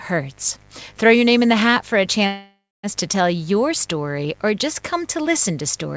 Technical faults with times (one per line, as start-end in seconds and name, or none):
0.00-5.97 mains buzz
2.27-2.86 call audio freeze